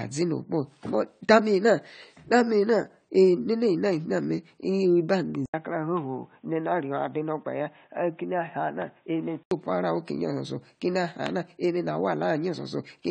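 From start to finish the speech sounds dull and smeared, with a watery, fizzy texture on sustained sounds and sibilants, and nothing reaches above about 9 kHz. This is likely AAC compression, with the AAC-LC codec working at a low rate, which fits around 32 kbps. The coder has too few bits for its spectral lines, so it drops the top band entirely and quantises the rest coarsely. That leaves the plainly audible warble and grit.

At 5.46 s the sound cuts out for about 80 ms and comes back boxy, narrow and about 5 dB quieter, with nothing above 3.8 kHz and a faint new noise floor about 45 dB under the speech. At 9.51 s the fuller tone returns. The likely cause is an input switched to a poorer device, such as a headset in call mode, whose narrow band, lower gain and self-noise replace the original microphone for those four seconds.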